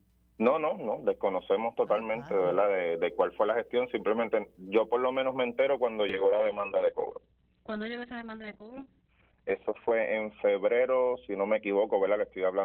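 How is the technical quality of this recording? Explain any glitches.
Quality falls sharply in the second half because of one glitch. A call bitrate drop begins at 6.1 s and lasts to the end. The estimated bandwidth fell, so the encoder was given far fewer bits, consistent with a fall from about 40 kbps to about 6 kbps. Coarser coding and a cutoff from 20 kHz to 4 kHz leave the sound rough and muffled, at its worst for about 3.8 s.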